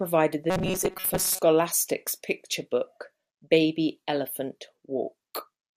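Incoming audio likely stopped arriving often enough, so the playback software kept looping its last tiny buffer, about 5.3 ms long, while the real signal was dropped. That is robotic sound from repeated short buffers, heard from 0.50 to 1.40 s. Around 70 percent of that stretch is repeated material, and the loop rate stamps a fixed 188 Hz pitch on the speech, turning it into a stiff metallic buzz that only loosely tracks the talking.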